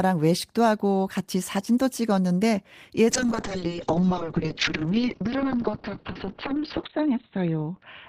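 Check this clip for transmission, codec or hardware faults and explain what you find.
One transmission fault is audible, a bitrate drop in the call. Call bitrate drop, from 3.1 s to the end: the encoder cut its bit budget, consistent with a fall from about 32 kbps to 8 kbps. Audio bandwidth narrows from 20 kHz to 4 kHz, so the speech turns muffled and rough, bottoming out for about 2.8 s.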